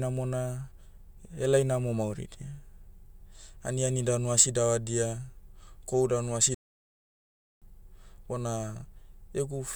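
A playback stall runs from 6.55 to 7.62 s, right after "kohu danu asi": the speech cuts out in mid-flow and the output falls completely silent for about 1.07 s before sound returns. A gap this long and this abrupt points to the player having likely run dry of buffered data or had its output thread held up, leaving nothing to send to the device until it recovered.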